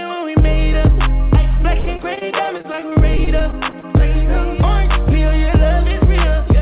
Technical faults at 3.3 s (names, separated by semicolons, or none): repeated packet loss (robotic sound)